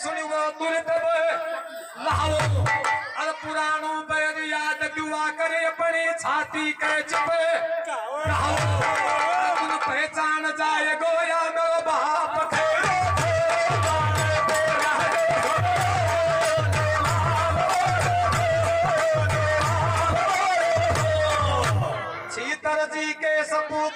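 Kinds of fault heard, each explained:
Call bitrate drop: from 16.9 to 23.03 s the encoder codes the audio much more coarsely, consistent with a fall from about 64 to 18 kbps held lowest for 4.31 s. The sound turns rough, watery or muffled, then clears as the bitrate recovers before the end.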